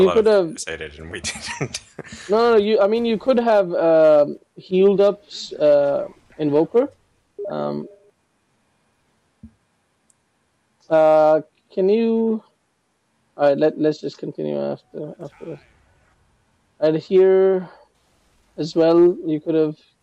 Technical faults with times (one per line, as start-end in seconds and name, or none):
0.00-20.02 hard clipping